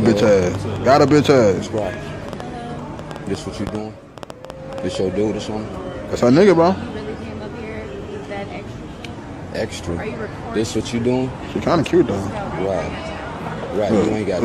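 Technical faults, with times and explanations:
0.06–4.96 s: train of clicks, around thirty sharp, similar-shaped pulses at about 6 per second with uneven spacing, peaking roughly 10 dB above the programme level. The ticking sits over the sound and in gaps alike, pointing to likely external interference or a faulty connection or power supply.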